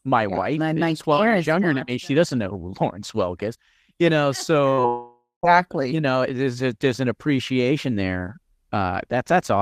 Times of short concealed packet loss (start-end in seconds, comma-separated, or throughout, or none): 4.69-4.86